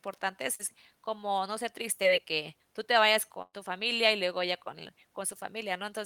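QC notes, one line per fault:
0.55–0.61 s and 2.03–2.06 s, short concealed packet loss: brief smears in the speech where about 40 ms and then 20 ms of audio never arrived. The receiver bridged each hole by extending the preceding sound for about 36 ms and 10 ms before blending back.
3.42–3.55 s, burst of packet loss: the speech stretches into a held, fading continuation of its last sound for about 107 ms, drops to roughly 30 ms of silence, then resumes. About 100 ms of consecutive audio was lost, so that stretch is skipped.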